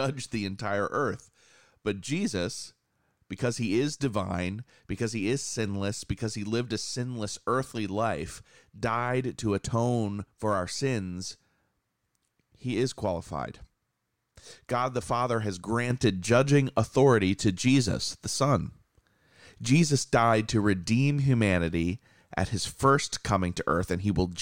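At 15.90 s a sudden gain jump lifts the speech and the background noise together by about 5 dB, and the higher level holds to the end of the clip. The change lands between one sample and the next, likely from a gain setting applied without a ramp. On the waveform the envelope steps up abruptly at that point; on a spectrogram a vertical boundary appears where every band, noise floor included, brightens at once.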